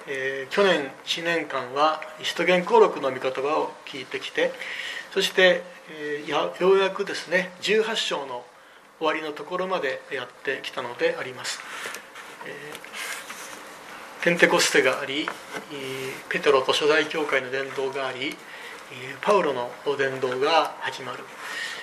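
No technical fault can be heard anywhere in the audio, and the signal holds steady throughout.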